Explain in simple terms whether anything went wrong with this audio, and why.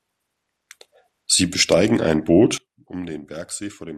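Something did go wrong. At 2.58 seconds the whole recording suddenly becomes much quieter and stays that way to the end. This is a sudden gain jump, most likely a volume setting changed instantly instead of being eased in. What sets it apart from a speaker turning away or a gentle fade is that the drop happens in an instant, and the background hiss drops at exactly the same moment as the speech.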